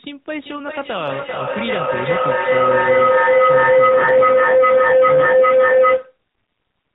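Feedback howl runs from 0.43 s to 6.22 s. Two devices in the same room are joined on the call, so each pass from loudspeaker back into microphone returns a little louder than the last. Instead of dying away, the repeats sharpen into a tone around 500 Hz, with one trip round the loop taking roughly 400 ms. At its loudest it stands about 13 dB above the speech, and it cuts off at 6.22 s when the loop is broken.

An AMR rate drop begins at 3.90 s and lasts until 6.10 s, overlapping the howl. The speech comes through the narrowband mobile codec, with nothing above 4 kHz and only light coding roughness before this point. Here the network has the coder spend fewer bits on the sound and more on protecting it over a weak radio link. The band stays the same and there is no break, but the speech turns buzzier and more synthetic, which points to a fall from 12.2 to about 5.9 kbps, before the rate recovers near 6.1 s.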